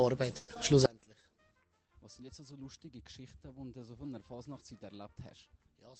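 From 0.37 to 0.58 s a long network dropout, likely, leaves a fading concealment buzz, a smeared band on the spectrogram, before sound resumes about 60 ms further on. From 0.86 s to the end, one channel inverted, likely, makes the mono sum drop by about 28 dB to a faint residue, a sharply shrunken waveform. Between 1.02 and 1.24 s a jitter buffer slow-down stretches sound to 87% speed by adding 36 ms of repeated cycles, visible as smeared, elongated harmonics, all beneath the Opus call path's 8 kHz spectral ceiling.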